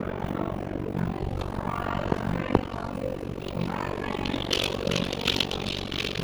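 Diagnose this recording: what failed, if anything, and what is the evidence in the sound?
An overlap-add ripple runs through the whole clip, pointing to a frame-based processing stage. The level pumps at around 50 Hz with a depth of about 60 dB, a harsh robotic flutter, because the windowed frames are rejoined with an overlap whose gains never sum to a constant.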